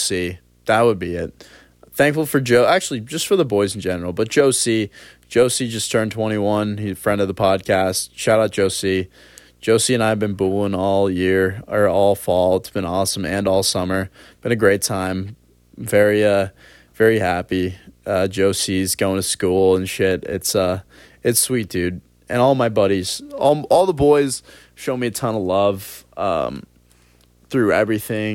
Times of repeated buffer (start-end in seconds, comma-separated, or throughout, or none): none